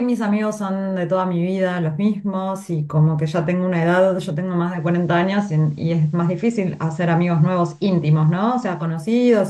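At 4.60 s, digital radio blending to analogue occurs. A 0.3 s cross-fade drops to FM: faint hiss, level shifts about 1 dB. Digital returns at 9.01 s.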